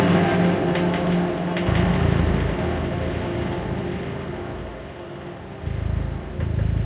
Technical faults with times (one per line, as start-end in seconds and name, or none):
none